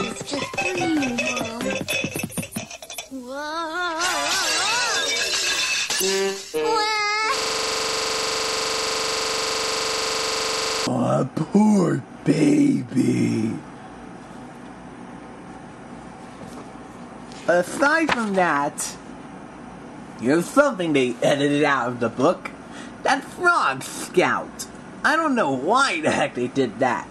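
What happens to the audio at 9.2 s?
At 9.2 s the audio is caught in a system hang loop running from 7.38 to 10.87 s. The system stalled while the hardware kept replaying one 42.67 ms piece of its ring buffer, which fits a 2048-sample buffer, producing a rasping buzz at 23.4 Hz.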